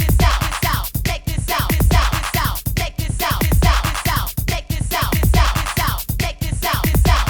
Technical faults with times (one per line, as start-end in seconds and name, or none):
none